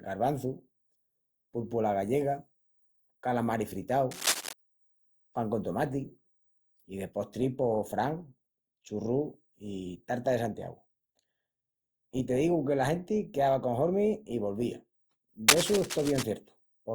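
A dense, uneven scratching rustle runs over the speech from 4.11 to 4.53 s and again from 15.48 to 16.24 s, about as loud as the speech itself. This cable scratch noise is likely from a worn cable or connector shifting, its contact resistance fluctuating rapidly.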